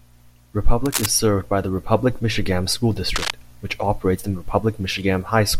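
At 0.85 to 1.06 s, just before "served by the", and again at 3.15 to 3.30 s, ahead of "which operates the", cable scratch noise rasps over the speech, only a little quieter than it. Unlike isolated clicks, each burst is a dense, uneven scratching, likely from a worn connector moving.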